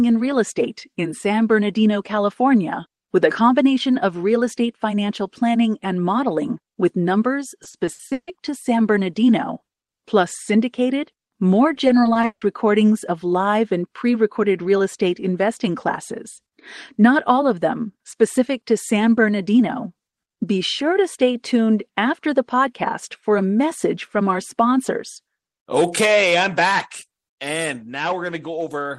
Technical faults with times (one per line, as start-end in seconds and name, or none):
7.63-8.29 repeated packet loss (robotic sound)
11.73-12.43 repeated packet loss (robotic sound)